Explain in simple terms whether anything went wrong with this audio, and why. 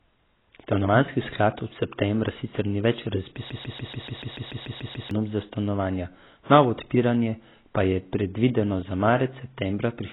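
Two things went wrong. The speech was likely squeezed hard with AAC compression, which throws away detail to save space. Nothing above about 3.9 kHz survives, so the whole clip sounds dull and muffled, with a smeared, warbly texture on hissy sounds.

From 3.50 to 5.11 s, right after "septembra sicer ni več", the playback or stream likely stalled and produced a broken-record loop. A 0.14-second scrap repeats 11 times back to back, and the speech that belonged there is lost before "za stanovanja novo odpiranje".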